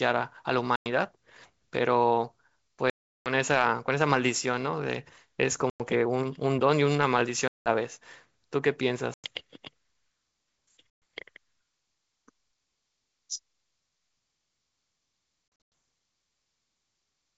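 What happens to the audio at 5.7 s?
Packet loss on the ADPCM call drops about 100 ms of speech, roughly five packets, from 5.70 to 5.81 s. The decoder's predictor and step size then lose sync with the sender's, so after the hard-edged silent gap the speech returns slightly distorted before settling.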